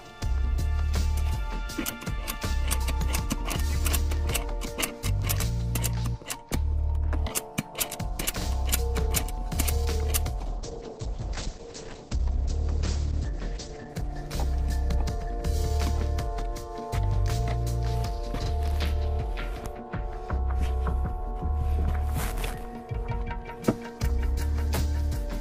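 Overlapping chunks at 8.41 to 8.46 s: the audio was handled in 10-second chunks, and the next chunk began 44 ms before the previous one ended, so that short slice plays twice and is heard as a brief stutter or click at the join.

Call bitrate drop from 10.4 to 16.7 s: the call's bandwidth estimate collapsed and the encoder coded far more coarsely, which fits a fall from 96 kbps to around 9 kbps. The top end narrows from 20 kHz to 8 kHz, making the sound muffled and watery. It is roughest for about three seconds before recovering.

Overlapping chunks again at 18.46 to 18.50 s: about 10 s after the first, the same 44 ms doubling repeats at the next chunk boundary, giving a second matching stutter.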